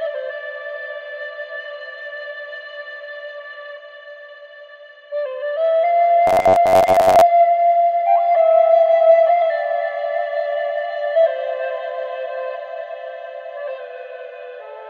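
From 6.27 to 7.21 s the sound turns into a rigid, metallic buzz at about 93.8 Hz that tracks the original only loosely. This is robotic sound from repeated short buffers, likely caused by audio arriving too seldom, so the software filled the gaps by replaying its most recent chunk while fresh material was skipped. Roughly half the audio in this stretch is repeated, and the 93.8 Hz rate fits a chunk about 10.7 ms long.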